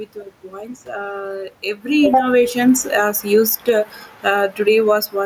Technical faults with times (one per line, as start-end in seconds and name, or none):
1.84-4.94 automatic gain falling
2.25-3.97 automatic gain rising